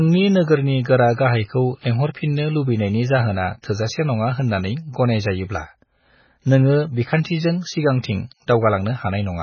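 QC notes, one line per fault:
Throughout: MP3 compression. The speech has nothing above 6.5 kHz and a heavy, watery, swirling texture, with sibilants turning metallic as weak frequency lines drop in and out from frame to frame. This fits a very low bitrate, around 16 kbps, where the encoder cuts the treble outright and starves quiet detail. Plain low-pass filtering would dull the top without this shifting, chirpy instability, which points to likely lossy coding.
3.62 s: pre-echo. Between "लुबैनायनि जाहोना" and "थोजासे नङा होननानै गनायजायोब्ला", a sharp onset is preceded by a brief smear of hiss about 19 ms long, and the attack itself sounds softened. The codec spread quantisation noise sized for the loud attack across its whole block, filling the quiet moment before it. Unlike a click or dropout, the noise leads the transient rather than interrupting the sound.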